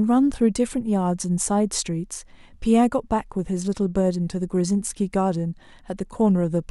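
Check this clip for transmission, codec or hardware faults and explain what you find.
No faults can be heard anywhere in this speech.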